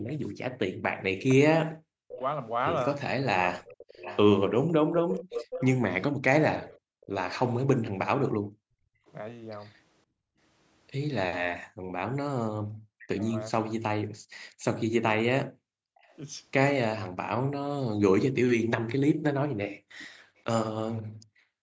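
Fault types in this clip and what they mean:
Echo leak: A delayed copy of the talker comes back about 526 ms late, likely because the far end's echo canceller let some loudspeaker pickup slip through. From 0.09 to 9.12 s it's fairly clear, roughly 10 dB under the speech. From 16.01 to 20.41 s it's much fainter, around 30 dB down.
Background gated by the echo canceller: While the loudspeaker is playing, the canceller clamps the microphone and the room sound drops away, then returns when it lets go. There's a brief dip of about 19 dB right at the start. Between 6.79 and 16.01 s, and again from 19.78 s to the end, the drops go as deep as about 40 dB.
Speech suppressed in double talk: When both sides talk at once, the canceller can't tell its own talker from the echo, so it likely pushes both down. The voice dips hard, by around 40 dB at worst. That happens for about a second in pieces between 1.96 and 4.07 s, and briefly from 12.83 to 13.25 s.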